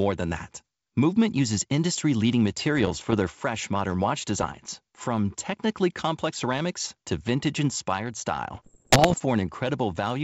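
Bursts of bit errors on an ADPCM link occur at 2.76 to 3.19 s, 4.41 to 4.66 s and, most severely, 8.54 to 9.16 s, where the error rate roughly doubles to about 1.5 percent, against about 0.7 percent earlier. Over the clear wideband G.722 path, each corrupted code word knocks the decoder's step size and predictor off track, so the error rings on briefly as pops, rough gritty bursts and short jumps in level.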